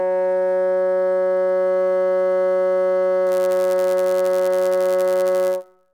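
A music clip that, from 3.26 s to the end, carries a steady buzz at about 100 Hz and runs fractionally slow, at 0.996 of normal speed with pitch essentially unchanged. This is a block size mismatch (padded): each short block gets a brief zero-filled gap, repeating at the block rate.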